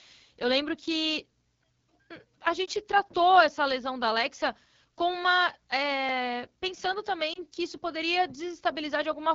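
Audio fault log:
Throughout, AMR wideband (HD Voice) codec: the speech was coded at a very low rate, which fits the 8.85 kbit/s mode, one of AMR-WB's two lowest. Too few bits go to the pulse excitation driving the vocal tract model, so the voice sounds plainly rough and raspy.
2.66 to 2.68 s and 7.33 to 7.43 s, lost AMR speech frames: each time, what sounds like a single corrupted frame was replaced by the decoder repeating its last good pitch and vocal tract settings at reduced gain, giving a brief dip or warble before the voice returns weak or rough for a moment.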